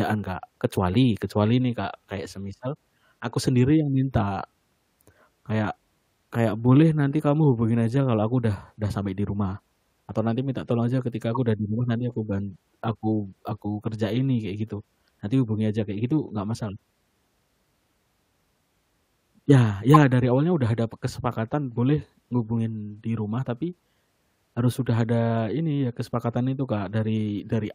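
At 11.34 to 11.37 s and again at 19.94 to 19.96 s you get a corrupt frame decoded. Flipped bits in a few compressed frames got played anyway, throwing energy into the wrong frequencies as a short chirp, squeak, blip or burst of noise. The second one is much louder.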